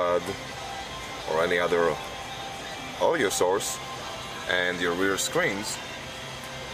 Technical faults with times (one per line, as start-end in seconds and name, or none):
6.01 dropped samples